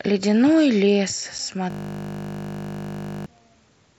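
At 1.38 s the speech drops out for a hole of about 7.5 ms, which fits a single lost frame. This is unconcealed Bluetooth headset packet loss: a voice packet between headset and phone never arrived, and nothing was patched into the gap, so silence sits where the sound should be. It is a short hole with abrupt edges. On a waveform it is a flat, near-zero notch with sheer edges, and on a spectrogram a thin vertical gap through every band.

From 1.70 s to 3.26 s the audio turns into a steady 50 Hz buzz. This is a system hang loop. The machine or its audio driver froze while the sound hardware kept replaying the same 20 ms of its ring buffer, about 78 times over 1.55 s. The waveform shows one identical 20 ms shape tiled end to end. The spectrogram shows frozen horizontal harmonics spaced 50 Hz apart. Across the whole clip the mSBC wideband link passes sound up to 8 kHz.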